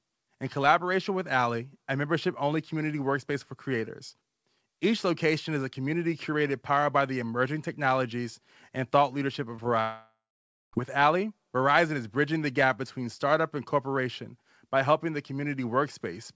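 Right after "technologies and thought leadership" you get two quick short concealed packet losses, at 9.56 to 9.60 s and again at 9.64 to 9.67 s. Each time about 20 ms of the call didn't make it to the decoder in time, so the receiver stretched the last bit of sound to cover the gap and then blended back in. You hear it as a little smear or wobble, two small hiccups almost on top of each other.

Then at 9.81 s the audio cuts out properly until 10.75 s, which sounds like a long network dropout, most likely packets simply not arriving for nearly a second. The receiver keeps the last sound going as a buzzy tail that fades out, and roughly the last half second of the gap is just silence. When the audio returns, that stretch is gone for good.

Throughout, nothing gets above 8 kHz, which fits a wideband call codec like G.722.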